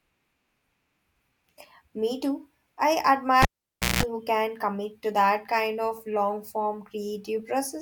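Right after "too I", at about 3.42 s, there's a cable pulled and plugged in: the lead comes out while live, giving a pop and then roughly 0.56 s of near silence. On the way back in, only the tip makes contact at first, so you get about 0.19 s of 60 Hz mains buzz before the connection seats properly, another pop lands, and the speech returns by 4.03 s with "who can commit to".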